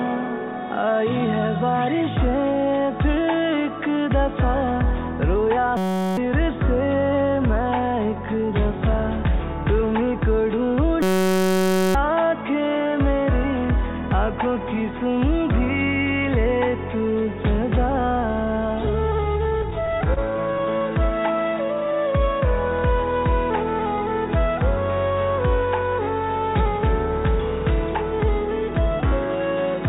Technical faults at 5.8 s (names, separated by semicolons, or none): system hang loop